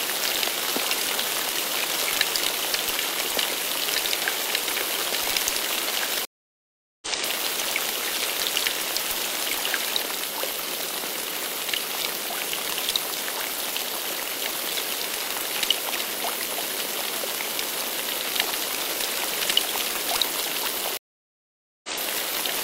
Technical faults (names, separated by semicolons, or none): stream reconnect